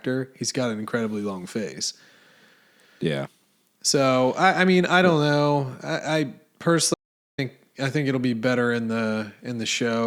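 The input path likely lost its signal from 6.94 to 7.38 s while the recorder kept writing silence, an audio dropout to silence. The speech cuts off mid-flow into a total void, no room tone, for about 0.44 s, returning on "I think it'll be".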